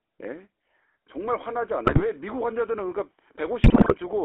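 Throughout, the speech has the buzzy, gravelly roughness of the GSM full-rate codec, which fits a 13 kbps pulse-excited vocal-tract model, with the band confined to 300 Hz to 3.5 kHz. At 1.86 to 2.05 s and 3.64 to 3.95 s, GSM bit errors corrupt the decoded filter, pitch and gain values, breaking the speech into squawks, pops and gargling.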